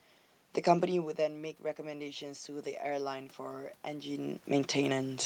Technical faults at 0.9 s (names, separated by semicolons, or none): automatic gain rising